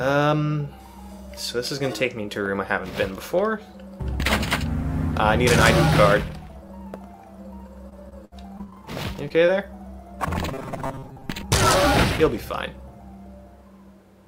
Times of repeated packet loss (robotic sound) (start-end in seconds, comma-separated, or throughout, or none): 7.89-8.76